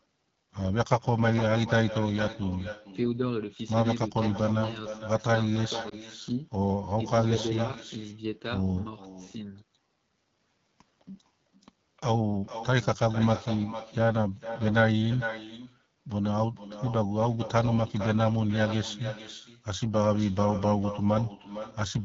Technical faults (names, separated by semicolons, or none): echo with no canceller; AMR wideband (HD Voice) codec; lost AMR speech frames